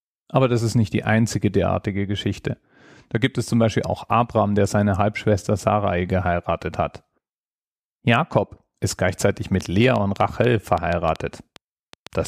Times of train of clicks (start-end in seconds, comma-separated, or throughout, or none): 9.61-12.27